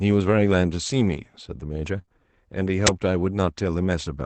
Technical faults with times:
1.97-1.99 lost packet rebuilt from error correction
2.01-2.20 short concealed packet loss
2.87 uninitialised buffer

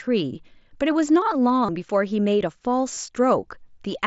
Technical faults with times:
1.66-1.69 concealed Bluetooth headset packet loss
2.94-2.97 concealed Bluetooth headset packet loss

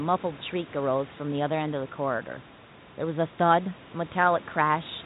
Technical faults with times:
none

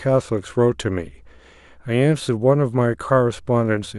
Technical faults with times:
none

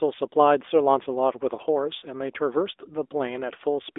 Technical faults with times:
0.00-3.98 AMR narrowband mobile codec

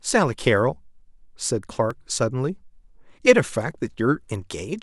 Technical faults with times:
0.88-3.94 periodic USB or driver dropouts

